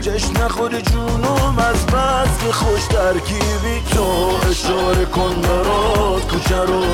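Nothing goes wrong anywhere in this one, so there's no fault to point to at any moment.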